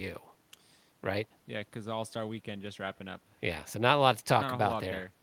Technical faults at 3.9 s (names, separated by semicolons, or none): none